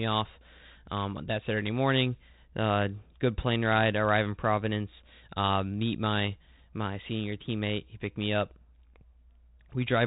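No technical faults can be heard in this speech.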